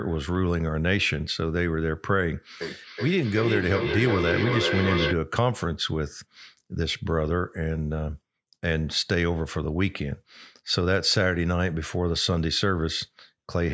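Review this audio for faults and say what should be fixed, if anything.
Feedback echo between two devices runs from 2.61 to 5.18 s. The speech returns roughly every 0.4 s, peaking about 3 dB below the direct speech. A second device in the room replays this microphone's signal, and the local echo canceller cannot remove it. To prevent it, mute the second device's speaker or have both participants use headphones.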